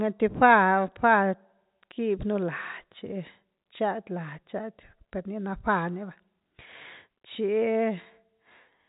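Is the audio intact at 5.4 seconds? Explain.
Yes, the audio is intact at 5.4 seconds, with no fault at that moment, only the expected G.711 telephone coding that leaves nothing above about 3.8 kHz.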